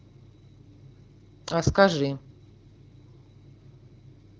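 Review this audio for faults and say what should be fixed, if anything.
Nothing should be fixed, as this audio has no faults.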